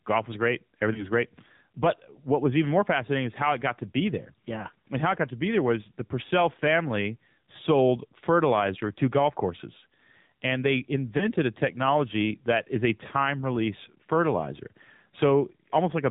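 It's a speech recording that's come through a phone call, and the AMR narrowband mobile codec is all over it. Nothing above 4 kHz survives, so the voice is dull and boxy, and there's a buzzy, slightly synthetic edge where the codec rebuilds each sound from a pitch pulse and a vocal-tract model rather than passing the waveform itself. The damage is plainly audible, which points to one of the lower AMR modes, something like 7.4 kbps, where there just aren't many bits per frame for the excitation.

On top of that there's gain pumping, with the level moving by something like 5 dB. Loud and quiet stretches end up squashed toward the same level. The likely cause is input gain set far too hot for the mic, with a fast limiter or compressor grabbing it back on every loud syllable.

Finally there are two moments of lost AMR speech frames, from 0.94 to 1.07 s and from 11.18 to 11.29 s. Each is a single 20 ms frame that didn't arrive intact, so the decoder patched it by reusing the previous pitch and filter settings at reduced gain. 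You hear it as a short dip or warble, and the voice sounds a little weak or rough for a moment afterward before it settles.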